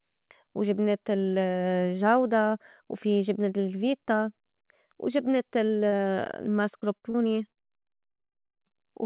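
It's a speech recording that came through a narrowband call path, with nothing above 4 kHz, which fits G.711 A-law. From 5.66 s it starts dropping packets: short concealed packet loss at 5.66, 5.88, 5.96, 6.80, 6.98 and 7.10 s, each hole about 20 to 40 ms. The receiver papers over each one by stretching the last bit of sound and then fading back into the real audio, so you hear quick smears or little wobbles, and a short consonant can just disappear. Then from 7.52 to 8.72 s it gets properly rough with repeated packet loss, the robotic-sounding kind. There are 11 gaps in that stretch, the longest about 110 ms, and roughly 38% of it is made-up fill. Because each patch is barely finished before the next hole shows up, the speech turns choppy, with chunks missing.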